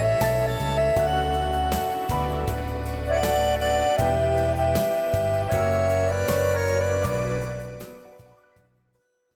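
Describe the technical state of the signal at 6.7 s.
At 6.7 s the signal is intact, with no audible fault at that moment.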